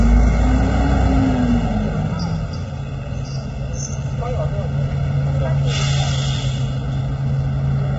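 From the first moment to the end, the sound has a hollow, phasey colour from channel delay (comb filtering). One channel runs roughly 1.5 ms behind the other, so when the two are summed to mono they cancel each other at a series of fixed frequencies. The first gap falls near 300 Hz, with more repeating higher up. On a spectrogram this appears as dark horizontal stripes that stay put for the whole clip.

Throughout, the everyday sounds are also rough and grainy, with a smeared, slightly synthetic top and a hard ceiling, since nothing reaches above 7.8 kHz. The likely cause is heavy low-delay AAC compression of the AAC-ELD kind, at a setting that fits a bitrate around 16 kbps. At so low a bitrate too few bits remain for fine tonal detail, so noise fills the gaps between components. On a spectrogram the energy stops abruptly at a flat line, and the texture below it looks blotchy.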